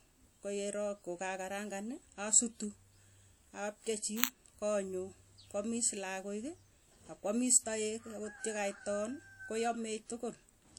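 It's a speech clip with a washy, ringing smear and a hiss that breathes along with the voice all the way through, likely from WMA compression at a low rate, something around 48 kbps. At 4.24 s, just before "konyuu koamis", there's a tiny, loud digital crack lasting about 0.67 ms, typical of an uninitialised buffer, which fits a 32-sample block of leftover memory being played as audio.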